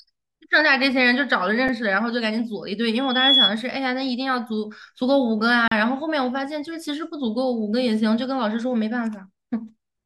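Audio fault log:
1.68 and 5.68–5.72 s, gap between stream segments: the speech drops out abruptly twice, first for 3.7 ms at 1.68 s and then for 37 ms. The two holes sit exactly 4 s apart, which fits 4-second stream segments whose time stamps don't quite meet at the joins. The player fills each shortfall with digital silence, so the edges are hard, but no speech is actually removed.
2.94–3.54 s, loudspeaker feedback squeal: a single tone at 3.4 kHz rises out of the speech over roughly 0.4 s and ends up around 5 dB louder than the voice. A microphone is picking up the loudspeaker it drives, and at that one frequency the loop gain exceeds one. Each pass around the loop adds to the tone, so it swells into a steady squeal and stops at 3.54 s.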